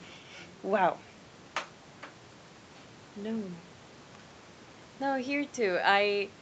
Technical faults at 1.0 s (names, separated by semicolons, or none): none